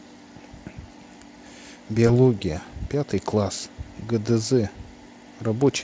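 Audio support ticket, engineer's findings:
Brief smear at 2.07 s, sound stretched into a buzzy tone or coloured noise that fades, weak and distorted through 2.13 s. VoIP packet loss concealed by the speech codec. Gap length fits one lost 20 ms frame. Decoder repeated last pitch and filter at falling gain. Recovery lag because each frame builds on the previous decoder state. Codec is Speex at 34 kbps, with little codec damage audible.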